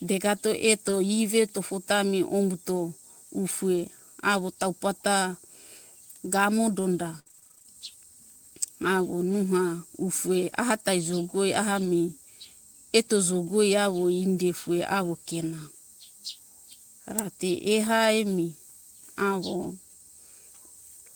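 Speech clip with two kinds of transmission fault. Lost packets rebuilt from error correction occur at 0.87–0.93 s, 11.81–11.87 s and 19.63–19.65 s, spanning 40, 40 and 20 ms; each stretch was replayed from a low-bitrate redundant copy, so nothing drops out but the audio turns briefly rougher and noisier. Repeated packet loss (robotic sound) runs from 7.19 to 7.74 s, just after "gamo donda": 11 gaps, the longest 62 ms, about half of the span patched by extending the previous sound, giving a choppy stretch with pieces missing.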